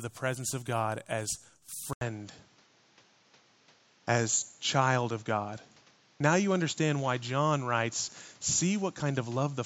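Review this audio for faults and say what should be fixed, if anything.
At 1.93 s there's an 80 ms gap, then the speech goes dull to the end: nothing above 7.6 kHz, a jump in level of roughly 5 dB, and a new noise floor about 30 dB down. That's likely the input switched to a poorer device. Pin the recording input to the intended microphone and turn off automatic device switching.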